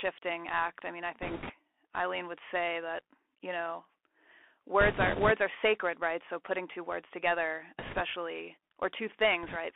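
Throughout, the speech carries a Bluetooth CVSD headset codec. It sounds confined to roughly 250 Hz to 3.4 kHz, which fits a 64 kbps one-bit delta stream. Sibilants turn scratchy, and a grainy hiss sits underneath.

Bit errors on the Bluetooth voice link follow. The first runs from 1.22 to 1.52 s, after "act I mean I". The second runs from 4.81 to 5.31 s, before "are sacred right". The third runs from 7.79 to 8.01 s, after "putting two words together". The last runs from 9.43 to 9.56 s. Flipped bits add a rushing crackle without loud clicks. It is heavier in the first two bursts.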